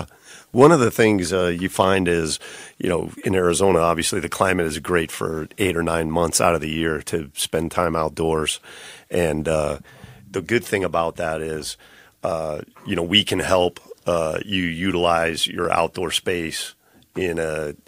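Speech with two brief jumps, at 0.54 s before "of the things uh" and at 15.65 s before "outdoor space", likely dropped buffers (overruns) skipping a few milliseconds of audio. Each shows as a waveform discontinuity and a thin vertical spectrogram stripe.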